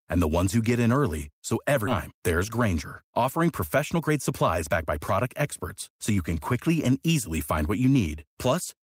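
At 1.87 to 1.89 s the speech skips ahead. Roughly a second of audio never reaches playback, and nothing fills the hole, so the sound on either side is spliced almost directly together. The jump is heard as an abrupt lurch forward, with the flow of speech suddenly broken. On a waveform the envelope changes shape with no silence between the two sides. A spectrogram shows a hard vertical seam where harmonics and formants shift at once instead of gliding.

Between 3.76 and 5.43 s there is a jitter buffer speed-up. The receiver had built up excess delay and shed about 150 ms by repeatedly cutting out short pitch-period slices. Speech runs at about 108% speed while keeping its pitch, so it sounds hurried. A shorter burst follows from 5.89 to 6.18 s at about 110%, removing around 40 ms. On a spectrogram the harmonic spacing stays put while syllables and pauses look compressed in time. The waveform's periodic cycles keep their length, but fewer of them fill each stretch.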